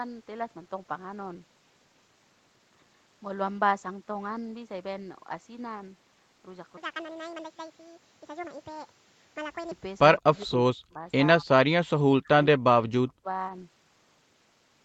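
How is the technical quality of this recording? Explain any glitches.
Two glitches affect the last few seconds of this speech clip; its band stops at about 8 kHz, consistent with the call path.

Echo leak, 10.19 to 10.41 s: a very faint copy of the speech trails by 164 ms, likely because the far end's echo canceller let its loudspeaker pickup through. A fixed delay separates it from room reverberation.

Speech suppressed in double talk, 10.22 to 11.05, 11.4 to 11.49, 12.07 to 12.3 and 12.54 to 13.28 s: the speech drops out in deep gaps. This is likely the echo canceller muting both talkers. Short dropouts in the level distinguish it from packet loss, which leaves filled-in concealment artefacts.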